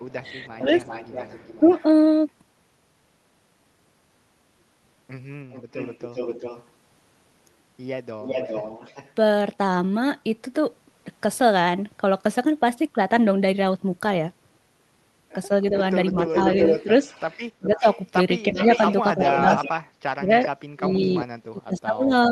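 Echo leak from 0.08 to 1.83 s: a copy of the speech trails about 392 ms behind, roughly 15 dB down, likely because a far-end loudspeaker's echo canceller let residual pickup through. Speech suppressed in double talk from 0.2 to 0.65 s: the talker dips by up to about 10 dB in brief pieces totalling around a tenth of a second, likely because the canceller confused talker and echo while both sounded together. It happens again from 1.62 to 1.69 s, with a shallower dip of about 5 dB. The echo leak returns from 5.51 to 6.67 s, again 392 ms late and about 15 dB down, and from 8.22 to 9.12 s, now stronger at about 10 dB below the speech. Speech suppressed in double talk from 15.71 s to the end: the talker is pushed down hard, as much as about 35 dB. Within that stretch, an echo leak from 16.28 to 21.8 s rises to only about 5 dB below the speech.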